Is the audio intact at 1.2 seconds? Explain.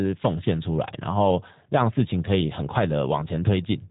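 No. At 1.2 seconds, as throughout the speech, G.729 codec damage is plainly audible. Each 10 ms frame is rebuilt from a vocal tract filter, pitch predictor and sparse pulses, which fits an 8 kbit/s G.729A stream. Nothing passes above 3.8 kHz, leaving a rough, synthetic sound.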